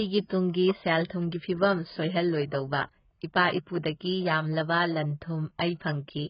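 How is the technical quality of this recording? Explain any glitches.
The recording is heavily degraded by one fault lasting the whole clip. AAC compression, throughout: likely AAC-LC at a very low bitrate, around 12 kbps, coarsely quantising frequency lines, leaving dull speech with nothing above 5.1 kHz and warbling, smeared sibilants.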